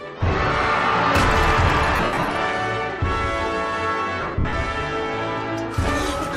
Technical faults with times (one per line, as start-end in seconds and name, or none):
1.96-2.30 lost LE Audio frames
4.21-4.53 lost LE Audio frames